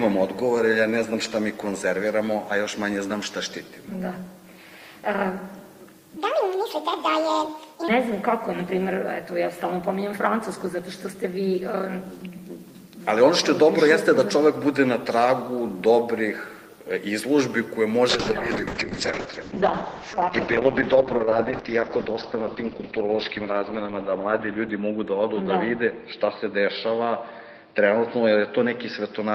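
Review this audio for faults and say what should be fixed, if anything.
From 6.17 to 7.88 s, a section at the wrong speed plays 1.69 times too fast. Pitch rises with it, around ten semitones. The sound turns high and hurried, then snaps back. The likely cause is that segment being resampled against the wrong clock.

From 18.11 s to the end, a call bitrate drop makes the sound rough and muffled. The top end falls from 20 kHz to about 4 kHz, which fits the encoder dropping from 32 kbps to 7 kbps. The worst stretch lasts 5.91 s.

To prevent both, check each segment's clock rate during editing, and give the call link enough bandwidth headroom that the encoder never falls to its lowest rate.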